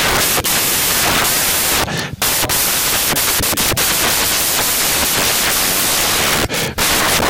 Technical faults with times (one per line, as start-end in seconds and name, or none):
0.00-7.30 samples built from the wrong bytes